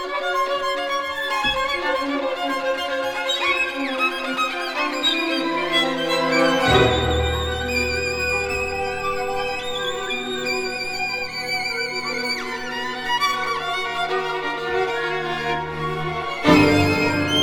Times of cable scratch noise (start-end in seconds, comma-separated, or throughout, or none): none